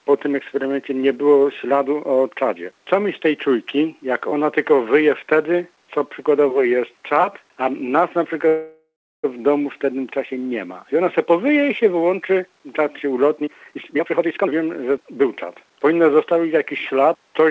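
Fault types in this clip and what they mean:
Call audio freeze: From 8.48 to 9.26 s the sound stalls for about 0.76 s. The last sound is stretched into a fading buzz or hiss, then about 0.33 s of silence. It resumes where it stopped, so nothing is lost. Delayed packets draining the jitter buffer are the likely cause.
Jitter buffer speed-up: From 13.37 to 15.94 s the audio runs about 1.29 times faster at unchanged pitch and sounds hurried. The receiver cut many tiny pitch-period slices, roughly 0.7 s in total, to shrink the built-up delay.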